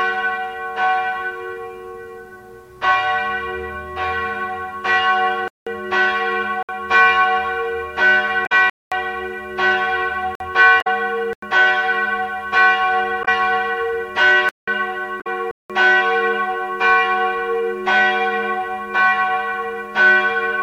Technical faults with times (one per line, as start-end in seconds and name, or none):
5.48-5.67 block of digital silence
6.63-6.69 block of digital silence
8.43-8.52 damaged data in a compressed stream
8.70-8.92 block of digital silence
10.35-10.40 block of digital silence
10.78-10.87 damaged data in a compressed stream
11.33-11.42 block of digital silence
13.21-13.28 damaged data in a compressed stream
14.49-14.68 block of digital silence
15.17-15.27 damaged data in a compressed stream
15.51-15.70 block of digital silence